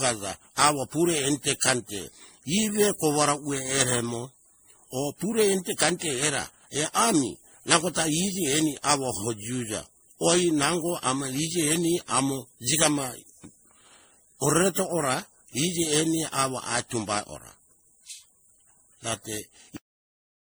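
From the start the speech sounds swirly, smeared and hollow, with softened consonant attacks, more damage than a single encode at around 64 kbit/s would cause. This is generation loss, likely from about seven MP3 re-encodes, each adding new quantisation noise and spectral holes on a shifted frame grid.

At 19.77 s the speech stops mid-sound and falls straight to digital silence until the end, with no decay or room tail. That makes it a cut-off end, where the final buffers were never written, rather than a dropout, because the sound never resumes.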